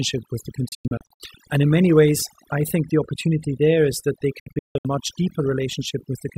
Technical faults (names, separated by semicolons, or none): overdone noise removal; digital broadcast dropout